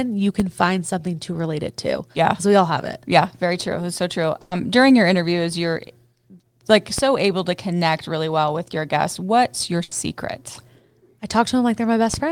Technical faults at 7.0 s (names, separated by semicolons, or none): DC step